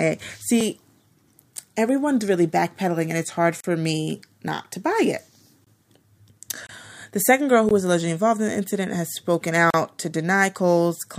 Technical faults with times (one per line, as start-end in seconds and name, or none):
3.60-3.64 gap between stream segments
5.64-5.67 gap between stream segments
6.67-6.69 gap between stream segments
7.69 gap between stream segments
9.70-9.74 gap between stream segments